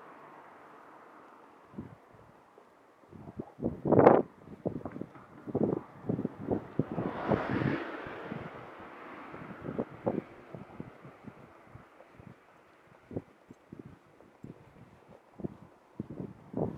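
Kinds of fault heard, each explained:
Nothing stood out on listening to this clip.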